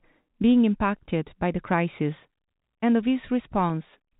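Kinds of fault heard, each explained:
No faults detected; the speech sits in the ordinary narrow telephone band of its A-law coding.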